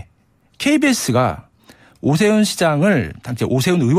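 A short speech recording with no audible technical faults anywhere in the signal.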